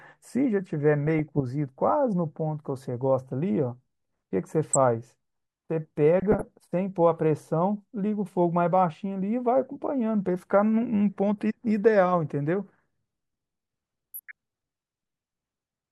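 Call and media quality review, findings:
DAB burbling, four bursts: 1.07–1.41 s, 4.68–4.76 s, 6.20–6.43 s, 14.14–14.34 s. Weak reception lets bit errors, a few tenths of a percent, slip past error correction into the MP2 stream. Corrupted sample values put noise blips into single sub-bands; corrupted scale factors throw individual sub-bands up or down in level frame by frame. Heard as short noise blips over the speech. Each burst spans a short run of damaged frames.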